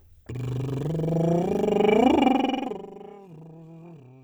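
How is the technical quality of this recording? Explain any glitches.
There's one glitch in this music recording, a patch of zipper noise during a fade. From 2.24 to 2.92 s the level drops by about 20 dB, but it goes down in 3 dB jumps rather than a smooth ramp, roughly ten steps a second. Each jump is an instant gain change with no smoothing, so it leaves a tiny click, and together they make a ticking, zippery texture on the music while it fades.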